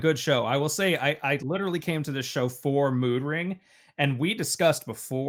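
Nothing technical goes wrong anywhere in this speech recording, so there's no fault to point to.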